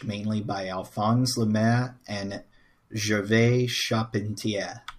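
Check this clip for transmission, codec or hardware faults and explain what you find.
Nothing in this bit of speech points to a transmission, codec or hardware problem, so there's nothing to flag here.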